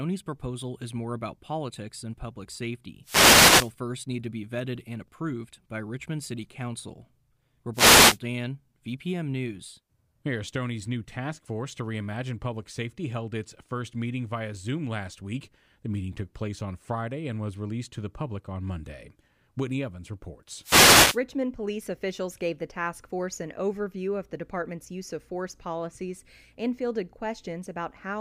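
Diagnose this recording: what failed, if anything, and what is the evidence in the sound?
Wireless microphone noise hits, at the analogue radio link ahead of conversion: bursts of static swish over the speech at 3.03–3.73 s (after "about politics than public"), 7.73–8.19 s and 20.62–21.20 s (before "police officials gave the"). The FM signal fades and receiver hiss rises. Network packet loss would instead leave gaps or repeated fragments.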